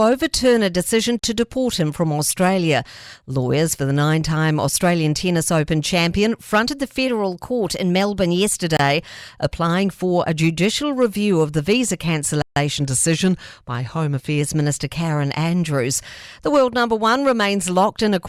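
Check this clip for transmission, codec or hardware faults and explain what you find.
The speech has two kinds of fault: three brief dropouts and two passages where speed and pitch shift together.

Bluetooth stall: the speech cuts to silence for 41 ms at 1.19 s, 25 ms at 8.77 s just before "applying for a judicial", and 144 ms at 12.42 s right after "review of the visa". The likely cause is radio interference delaying packets, so the headphones' buffer emptied and playback halted until retransmitted data arrived.

Drift correction step: from 7.07 to 8.49 s, just after "champion fronted the", the speech runs about 6% fast and sounds roughly a semitone higher. From 12.76 to 14.41 s it runs about 6% slow and sits roughly a semitone lower. Clock-matching software likely changed the playback rate in a single step to refill or drain its buffer, which moves speed and pitch together.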